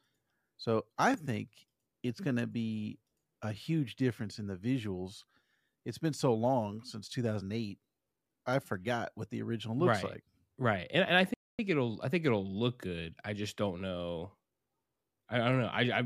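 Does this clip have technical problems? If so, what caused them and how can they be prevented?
Yes. There is a playback stall in this speech clip. Right after "and and I", the audio cuts to silence at 11.34 s. It stays silent for about a quarter of a second, 250 ms. It resumes at 11.59 s with "it'll I think it'll". The likely cause is the player running short of buffered data, or its audio thread being blocked briefly, so nothing reached the output. A larger playback buffer and keeping the audio thread free of other work would prevent it.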